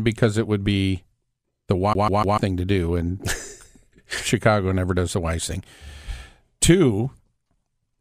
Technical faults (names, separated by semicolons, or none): CD stuck on one turn